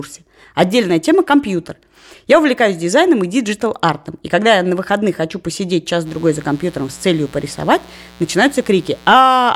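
At 6.04 s, just after "на выходных хочу посидеть", a mains buzz enters and runs until 9.17 s. It is a steady, raspy buzz sitting roughly 25 dB below the speech. Its fundamental is 60 Hz, and a dense stack of harmonics extends well into the kilohertz range. That spectrum points to sharp switching spikes leaking in twice per mains cycle, as from a dimmer, a rectifier or an unshielded cable, rather than a clean hum.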